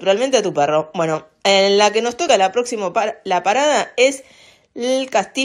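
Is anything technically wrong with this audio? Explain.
Yes. Damaged data in a compressed stream at 2.26 s: corrupted bytes in the encoded stream make the decoder misread the affected frame, lose sync and hunt for the next valid frame header. The result is a brief chirp or blip in the sound.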